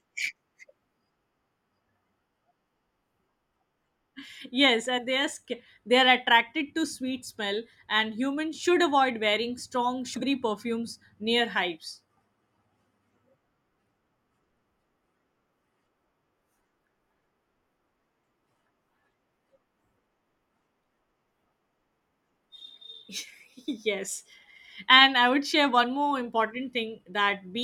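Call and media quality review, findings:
Speech jumps ahead: at 4.97 s just before "they are", dropping around 40 ms; 10.13 to 10.23 s between "should avoid wearing strong" and "perfumes near hives", around 100 ms gone. Compressed frames skipped: the decoder drops missing or damaged frames, and the audio jumps ahead by their length.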